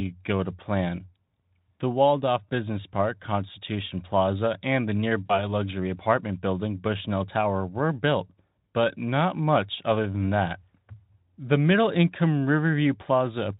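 Right after "and the", at about 5.26 s, there's VoIP packet loss concealed by the speech codec. About 40 ms of audio went missing, which fits two 20 ms frames. The decoder extrapolated from its last pitch and filter state, so the sound smears and fades until about 5.49 s, just before "apartment building" comes back.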